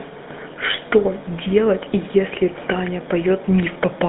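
From start to end the speech carries GSM full-rate codec damage, plainly audible. The vocal tract is modelled and driven by sparse, regularly spaced pulses, giving a buzzy, gravelly roughness. The band sits near 200 Hz to 3.7 kHz, nothing above 3.9 kHz, consistent with a 13 kbps stream.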